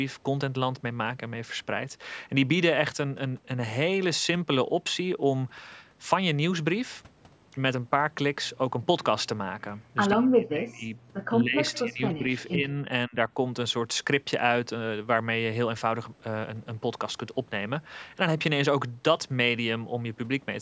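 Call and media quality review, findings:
Speech suppressed in double talk: near-end speech ducks or breaks up at 10.15–10.93 s, 11.43–11.57 s, 11.82–12.24 s, 12.55–12.70 s and 13.08–13.30 s, with drops of up to about 40 dB. Likely the echo canceller attenuating both talkers during overlap.

Echo leak: a faint delayed copy of the speech is audible at 11.68–11.79 s, trailing by 133 ms at about 25 dB below the direct signal. Likely residual loudspeaker echo the far-end canceller failed to remove, returned into the call.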